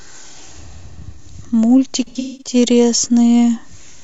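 From 2.07 to 2.55 s, AAC frame loss with concealment fills 300 ms of gaps from the last good spectrum instead of a dropout's hard silence.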